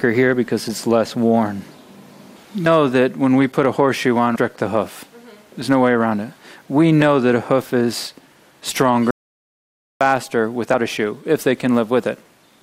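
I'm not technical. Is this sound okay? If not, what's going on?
No. The sound has two kinds of problem.

Damaged data in a compressed stream: at 2.65 s, from 4.34 to 4.37 s, and at 10.73 s there are tiny chirps or blips. Part of the stored file was wrong in those spots, so the player misread a scrap of it and skipped ahead to the next piece it could understand. Each one is a burst of odd noise lasting a fraction of an instant, sometimes with a jump forward.

Audio dropout to silence: from 9.11 to 10.01 s, about 0.9 s of sound vanishes. The gap is dead silence, with not even the faint background hum of the room. This was likely caused by the input being cut off, for example a loose connection, while recording carried on. Unlike the blips, it makes no strange noise. The sound simply stops and later resumes, and whatever happened during that gap is lost.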